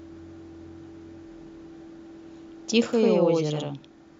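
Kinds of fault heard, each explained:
Channel delay (doubling): One channel runs about 93 ms behind the other, which fits a 4096-sample buffer at 44.1 kHz. Summed to mono, the late copy stands apart. From about 2.93 s to the end, the speech is doubled by an equal-level slap echo.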